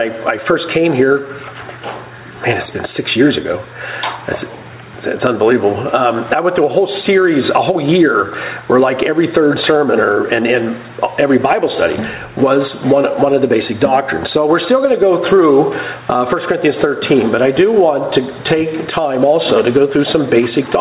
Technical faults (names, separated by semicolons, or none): gain pumping